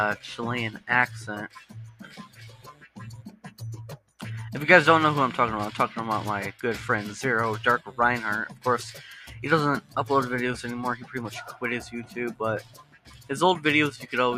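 A noise suppressor built for speech was left running, and it treats sustained and ambient parts of the sound as noise. Level swings by roughly 10 dB throughout, so held sound pumps and thins while attacks come through largely intact.

The sound is cut by the noise suppressor at 0.16–4.2 s (about 16 dB deep), 7.79–7.94 s (about 11 dB), 8.49–9.96 s (about 14 dB), 10.96–13.3 s (about 16 dB) and 13.94–14.1 s (about 10 dB). Each time, steady or decaying sound sinks and tails end early.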